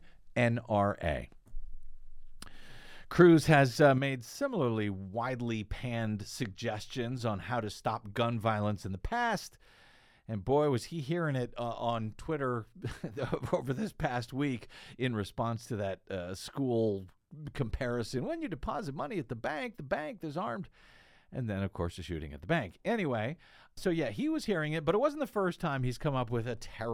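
From 3.98 s, right after "has uh", the speech drops abruptly by about 6 dB and stays down to the end, likely one channel dropping out before the mono sum.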